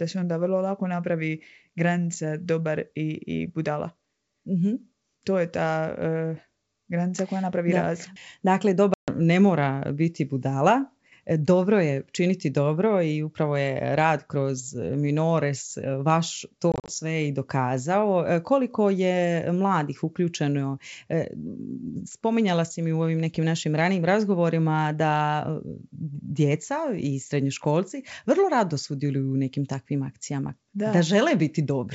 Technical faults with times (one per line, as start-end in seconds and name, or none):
8.94-9.09 packet loss on an ADPCM call
16.72-16.92 packet loss on an ADPCM call